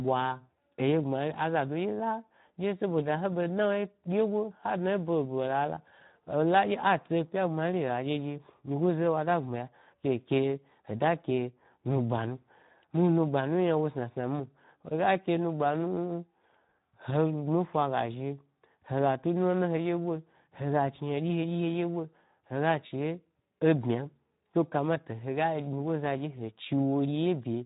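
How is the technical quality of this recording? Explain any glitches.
The quality is fairly rough, with one problem running through all of it. It's Speex codec damage for the whole clip. The speech sounds hoarse and noisy, as a low-rate CELP coder has too few bits for the excitation, which fits something around 11 kbps. There's also nothing above about 3.8 kHz, so it sounds dull and phone-like.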